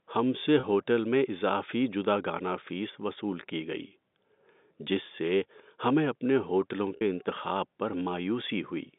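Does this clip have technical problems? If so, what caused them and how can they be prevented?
Yes. Packet loss with pitch repetition occurs at 0.60 to 0.63 s, just after "ہم سے", and at 6.96 to 7.01 s, after "سے ہمیں اپنے ہوٹلوں". The receiver loops the last pitch period over gaps of 30 ms and 50 ms, probably three and five lost packets. The first gap sounds like a brief buzzy hold. On a spectrogram, the harmonics run flat and unchanging across the gap, and the waveform repeats identical cycles while the level fades. A larger jitter buffer with redundancy or forward error correction on the telephone link would prevent these dropouts.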